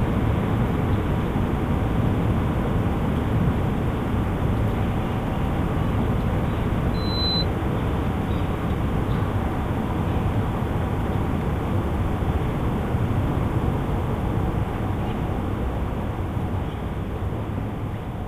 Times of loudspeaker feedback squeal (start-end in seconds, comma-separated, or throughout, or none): 6.94-7.46